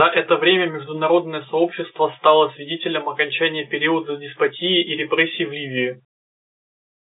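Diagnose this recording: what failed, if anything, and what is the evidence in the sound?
Nothing has failed: the speech comes through an ordinary G.711 telephone path at 64 kbps, band-limited to the usual line range of roughly 150 Hz to 3.7 kHz, with at most a faint trace of the format's own quantisation noise beneath it.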